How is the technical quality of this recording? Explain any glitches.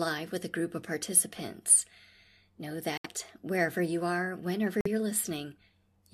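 The speech drops to dead silence twice: from 2.97 to 3.06 s, just before "wherever you are whenever", and from 4.81 to 4.87 s, right after it. Each hole starts abruptly and keeps the timing intact. This is a corrupt frame muted fault: damaged compressed frames were rejected by the decoder and replaced with silence. The gap lengths fit about three frames and two frames.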